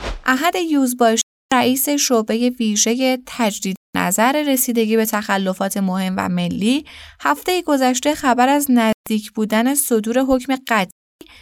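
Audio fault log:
1.21–1.52 s, 3.76–3.95 s, 8.93–9.07 s, 10.91–11.21 s: Bluetooth dropout. Speech cuts to silence for 0.30, 0.19, 0.14 and 0.30 s, likely from late packets being discarded. The waveform shows flat, sharply edged gaps and the spectrogram shows empty vertical bands. Afterward the speech resumes partway on, as though it had kept playing.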